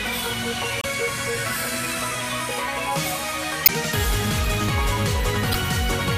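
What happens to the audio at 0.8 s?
Damaged data in the compressed stream hits from 0.80 to 0.85 s, a span of about 46 ms. The decoder misreads the corrupted frames, loses sync and hunts for the next valid frame header, so a brief chirp or blip replaces the audio there.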